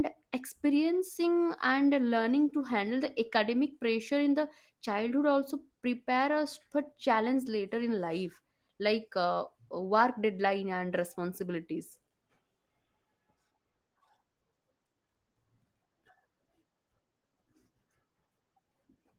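No technical faults can be heard in this speech, which carries only the light softening expected of Opus voice compression working at its full bandwidth.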